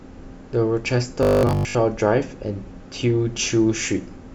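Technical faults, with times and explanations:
1.23 to 1.75 s, robotic sound from repeated short buffers: new audio likely stopped arriving in time, so the playback software filled the gap by looping the last short slice it held, around 20 ms long, while most of the real speech in that half-second was skipped. Replaying the same 20 ms slice over and over stamps a fixed 50 Hz pitch onto the voice. It becomes a rigid, metallic buzz that only loosely follows the speech underneath.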